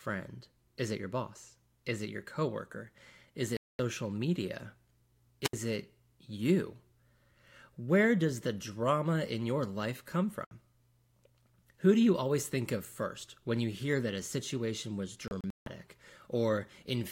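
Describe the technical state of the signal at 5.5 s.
At 5.5 s the speech breaks up: a short surge of hiss runs into a hole of near silence lasting about 72 ms, and the voice comes back on "it you", the whole event spanning 5.43 to 5.53 s. This is a wireless microphone squelch dropout. The analogue FM radio link faded for a moment, the receiver's noise rose as the signal weakened, and its squelch gate then muted the output until the carrier recovered.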